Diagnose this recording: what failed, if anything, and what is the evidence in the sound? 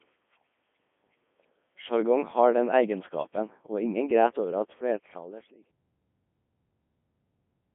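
Codec stage: the speech has been through the Codec 2 vocoder, heavily damaged, robotic and buzzy, band-limited to about 200 Hz–3.5 kHz with nothing above 3.7 kHz, which fits its 3.2 kbit/s mode. The decoder rebuilds the voice from sine waves using only pitch, voicing, energy and envelope, discarding the waveform. The fade-out ending at 5.71 s is still audible through it.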